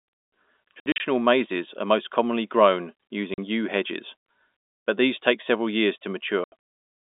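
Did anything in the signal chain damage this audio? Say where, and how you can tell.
Yes. Packet loss filled with silence, at the network stage: hard-edged holes at 0.8–1.0 s before "mazes are most commonly", 3.34–3.38 s between "are most commonly grown" and "yew hedges", and 6.44–6.52 s after "take several years to". The gaps fit lost 20 ms packets played as silence.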